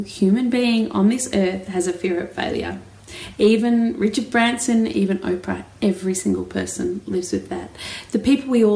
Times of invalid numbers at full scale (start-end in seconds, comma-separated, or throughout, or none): none